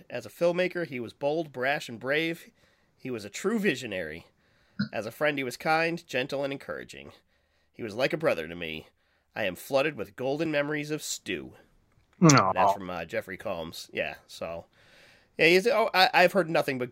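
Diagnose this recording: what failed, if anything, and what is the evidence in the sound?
Two skips in the speech at 8.21 s and 10.46 s, each with the sound jumping forward by about 15 ms, point to the buffer stage, likely a dropped buffer (overrun): unread samples were overwritten and the edges spliced together. No silent gap appears, which separates this from an underrun.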